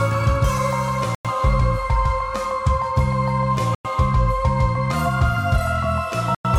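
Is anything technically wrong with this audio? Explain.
Yes. Short silent holes cut the audio at 1.15 to 1.25 s, 3.75 to 3.85 s and 6.35 to 6.45 s, each 100 ms long and recurring every 2.6 s. This is a gap between chunks: audio delivered in 2.5 s pieces has silence inserted at each join, so the sound is interrupted there but not lost.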